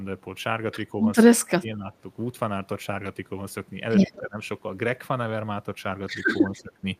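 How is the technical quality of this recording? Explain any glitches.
The speech has two recurring call-processing problems that show up together near the end.

Speech suppressed in double talk hits at 1.40–1.91 s, 4.17–4.38 s and 6.51–6.84 s. The voice sinks sharply, most deeply in the first stretch, and more mildly later. Most likely the echo canceller couldn't tell this talker from loudspeaker echo while both sides spoke, so it pulled everything down.

Echo leak appears at 4.13–4.18 s and 6.48–6.63 s: a faint, delayed copy of the voice trailing by about 190 ms, well below the main speech. It's likely the far end's loudspeaker pickup slipping past its echo canceller and getting sent back.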